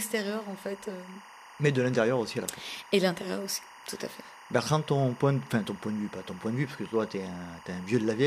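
Running under the speech from start to finish is a steady chirping warble, a buzzy two-tone flutter near 1 kHz and 2 kHz sitting roughly 20 dB below the voice. This is timecode bleed. Linear timecode at 24 frames per second, carried on an adjacent track or cable, has leaked into the audio path. Its square wave flips between the two pitches as it encodes each frame's bits, producing that relentless ticking warble.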